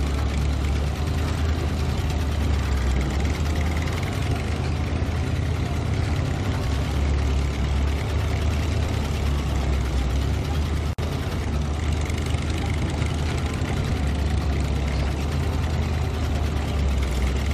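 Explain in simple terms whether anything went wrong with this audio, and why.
At 10.93 seconds the sound suddenly drops out for about 54 milliseconds, a brief hole with smeared edges, then picks up at 10.99 seconds exactly where it left off. This is a gap at a join of encoded pieces: the audio was compressed in separate chunks and stuck back together without trimming the short stretch of silence and padding each chunk carries at its ends, so that silence now sits in the middle.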